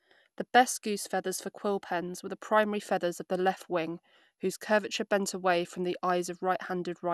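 A speech recording with generation loss running the whole way through. It has that swirly, hollow quality, and the consonant attacks are smeared more than a single lossy encode would account for. Nothing comes through above about 12.6 kHz. The character fits an MP2 chain at around 128 kbit/s, and the likely cause is the audio being decoded and re-encoded about four times, with each pass piling fresh quantisation noise and spectral gaps onto the last.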